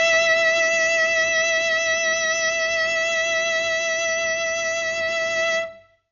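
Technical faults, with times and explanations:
Throughout, Dolby Digital compression: dull music, nothing above 7 kHz, rough fluttering noise around tones. This likely points to encoding at about 48 kbps.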